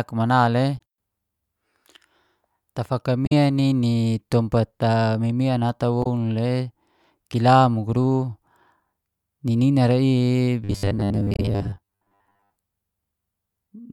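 At 0.77 to 0.80 s, 3.25 to 3.32 s and 6.02 to 6.06 s, damaged data in the compressed stream throws the decoder off. It misreads the bad frames, loses sync and hunts for the next valid frame header. Each time the speech gives way to a short chirp or squawk.

From 10.64 to 12.51 s, robotic sound from repeated short buffers takes over. New audio is likely arriving too slowly, so a slice of about 10 ms is replayed again and again while most of the real speech in this stretch is dropped. The repeats impose a fixed 100 Hz buzz, so the speech becomes a stiff, metallic drone that only loosely follows its rhythm. At 11.34 to 11.39 s, inside this stretch, another patch of damaged stream data adds one more blip.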